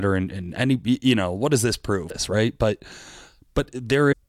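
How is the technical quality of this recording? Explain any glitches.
The recording has two short glitches caused by damaged data in a compressed stream. The first comes at 2.09 s, just after "know what does this". The second runs from 4.11 to 4.14 s. In both places the encoded bytes were corrupted, so the decoder misread those frames, lost sync and skipped ahead to the next valid frame header. Each is heard as a brief chirp, squawk, click or short hole.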